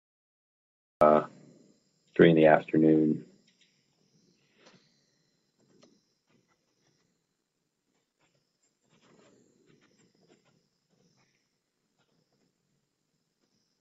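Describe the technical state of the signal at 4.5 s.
At 4.5 s the signal is intact, with no technical fault present at that moment.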